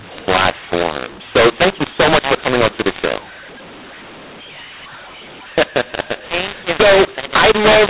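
From start to finish the speech carries a mu-law and A-law mix-up: telephone audio coded as A-law is being decoded as mu-law, scrambling sample levels so the sound turns harsh and gritty. Unlike plain clipping or the faint level-following noise of normal 8 kHz G.711, the pauses themselves fill with hiss.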